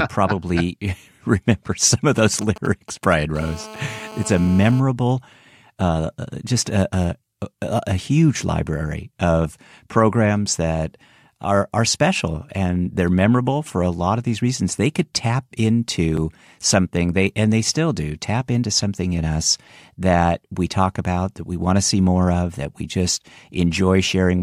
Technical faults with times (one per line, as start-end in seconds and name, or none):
2.18-3.37 GSM signalling bursts
3.38-4.80 GSM phone buzz